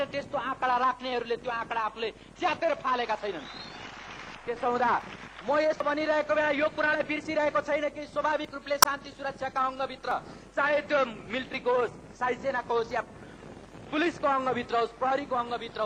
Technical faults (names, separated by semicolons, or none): dropped buffer (overrun); damaged data in a compressed stream